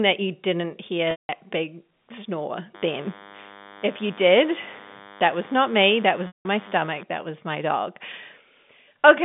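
From 1.11 to 1.29 s, the speech briefly turns into a held, buzzy tone that fades to silence and then cross-fades back. This is packet loss with pitch repetition: about 180 ms of audio went missing, and the receiver looped the last pitch period to bridge the gap before fading it out.

From 2.75 to 7.04 s, a steady, thin buzz sits roughly 20 dB below the speech. It is rich in harmonics above a 100 Hz fundamental, and it survives the narrow telephone band of the G.711 line. This is DECT cordless phone buzz: a nearby DECT handset or base transmits a radio burst every 10 ms, and the audio circuitry rectifies those bursts into an audible 100 Hz tone.

Within that buzz, from 6.27 to 6.45 s, the same held, fading tone returns. It is a second packet-loss gap of about 180 ms, concealed again by repeating the last pitch period.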